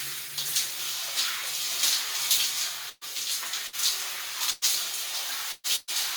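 A recording of sounds in which the last sound is briefly held and fades, and then the audio jumps ahead five times: at 2.89, 3.67, 4.51, 5.52 and 5.76 s. This is a burst of packet loss. Each dropout removed about 120 ms of audio (60 ms at 3.67 s). The receiver covered each gap by stretching and fading the last sound before resuming further on.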